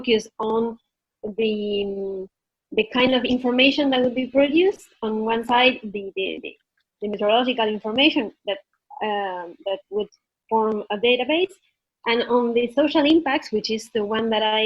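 A call bitrate drop runs from 0.59 s to 7.37 s in this audio clip. The encoder's budget appears to fall from about 64 kbps to roughly 15 kbps, holding its lowest for about 5 s. The sound turns coarse and muffled as high frequencies are cut, then recovers.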